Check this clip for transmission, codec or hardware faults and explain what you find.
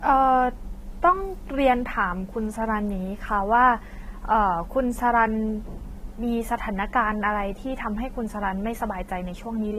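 One codec fault runs through the whole speech clip: transcoding between lossy codecs, with the cause likely a pass through Vorbis followed by a re-encode to AAC-LC. Throughout, the different artefact types of the two codecs are heard at once. The second encoder spent bits reproducing the first one's damage, which fits modest bitrates in both passes. On a spectrogram, energy stops abruptly at 15.4 kHz, with blotchy, holed upper bands below it; the waveform shows nothing unusual.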